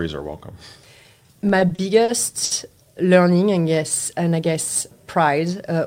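From 1.41 to 2.53 s the speech suffers repeated stalls (stutter). Packets arrived late, so the jitter buffer ran dry seven times, and each time the receiver stretched the last sound to bridge the wait, 180 ms in all, with the longest gap near 70 ms and nothing lost. The delivery drags and catches. On a spectrogram, short horizontal smears of frozen harmonics interrupt the moving formants, and the waveform shows brief repeated cycles.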